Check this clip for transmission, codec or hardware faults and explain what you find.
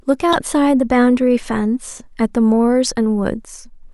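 One fault is present in this speech clip. Damaged data in a compressed stream, 0.32 to 0.35 s: corrupted bytes in the encoded speech made the decoder misread those frames and lose sync until it found a valid frame header, leaving a brief chirp, click or short hole roughly 20 ms long.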